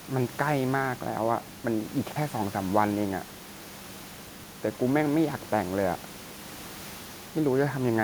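Chunks out of order at 2.04–2.16 s, 3.40–3.56 s and 4.28–4.44 s: in each, a 40 ms chunk of the speech plays behind the chunks that should follow it, arriving about two places late in the first case and three in the others. Nothing is missing, but each reshuffle leaves three abrupt joins, so each event is a brief jumbled stutter, heard over room noise sitting about 21 dB below the speech.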